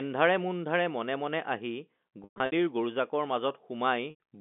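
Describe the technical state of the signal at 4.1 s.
Packet loss with pitch repetition: from 4.1 to 4.2 s, 100 ms of audio never arrived, which fits five 20 ms packets. The receiver filled the gap by repeating the last pitch period and fading it out, so the speech hangs on a buzzy, held tone that decays toward silence.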